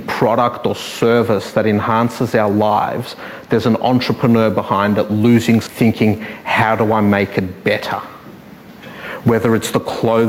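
Damaged data in a compressed stream appears at 5.62 s and lasts until 5.67 s, about 50 ms. At that point the encoded bytes reaching the decoder are corrupted, so it cannot read the affected frames correctly. It loses its place in the stream and has to hunt for the next valid frame header before decoding resumes. The result is a brief, harsh chirp or blip that cuts into the audio.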